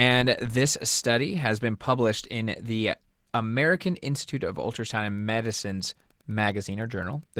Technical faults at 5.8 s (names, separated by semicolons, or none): Opus voice compression; Wi-Fi interference